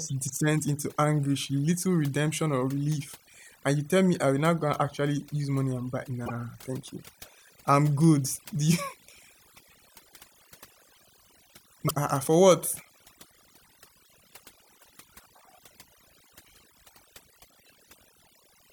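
Overdone noise removal runs through the whole speech clip: the cleanup was set so hard that quiet bands get gated away, leaving twinkly near-silence. At 6.23 to 6.31 s, right after "use money and buy" and before "thank you", there's damaged data in the compressed stream, a short glitch as the decoder loses sync on corrupted frames. The same thing happens again at 11.85 to 11.91 s, just before "uh for what".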